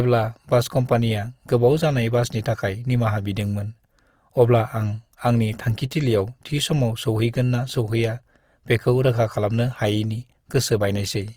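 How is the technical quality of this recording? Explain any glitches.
The recording carries plainly audible lossy-compression damage from start to finish, most likely Opus compression. The encoder appears to be running in its music-oriented CELT mode at full bandwidth, with a low bitrate, perhaps around 24 kbps. Short of bits, it keeps each band's energy but fills the detail by copying lower bands or injecting noise. The speech therefore sounds rough and grainy, with a noisy, fizzy texture over voiced sounds instead of the hollow swirl typical of MP3.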